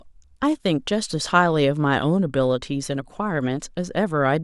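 From about 2.13 s to 3.88 s the speech picks up a bit of channel delay, a mild comb filtering. One side lags the other by roughly a single sample, a tiny fraction of a millisecond, so when they fold to mono the first cancellation notch lands way up around 20 kHz. You don't get an obvious hollow phasiness, just a slightly dulled, softened top end that lifts again after 3.88 s.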